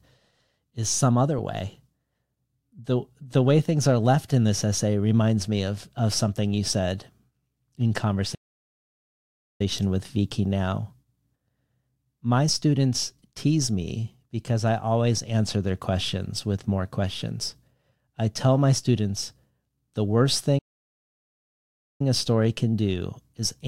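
The speech cuts out abruptly twice: from 8.34 to 9.61 s, about 1.25 s of dead silence, and from 20.58 to 22.01 s, about 1.41 s, just after "the worst", resuming with "a story can do". Each gap is a playback stall. The output goes silent mid-flow and then picks up again. The likely cause is the player running short of data or its audio thread being blocked until it recovered.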